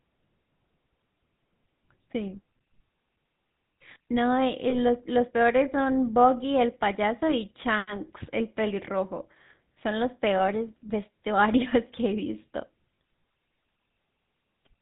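From start to finish the speech carries the GSM full-rate codec's buzzy, gravelly texture, consistent with 13 kbps full-rate coding. The coder rebuilds the voice from a vocal-tract model fed by sparse regular pulses, and nothing above 4 kHz survives, so the damage is plainly audible.

Lost GSM frames appear at 4.7 to 4.8 s, 10.38 to 10.41 s and 12.96 s. Each dropout fits a single missing 20 ms frame. The decoder repeats the last good frame's parameters, producing a brief rough, metallic ring.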